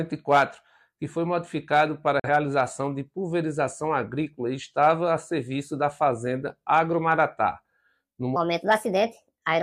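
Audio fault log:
2.19–2.29 s, digital broadcast dropout: the sound fades out over about 3 ms and sits silent for roughly a tenth of a second before coming back at 2.29 s. Around 43 ms of programme simply never arrives, which fits a single lost or corrupted frame. The receiver muted rather than play bad data, then picked up again once clean frames resumed, so nothing sent during the gap can be recovered.
8.36–9.62 s, section at the wrong speed: from 8.36 s to the end, everything plays 1.37 times too fast, so it sounds hurried and sits about five semitones higher than before. Speed and pitch jump together at that point because the samples are simply being read out faster, not pitch-shifted on their own. The likely cause is this stretch being played or edited against the wrong clock rate.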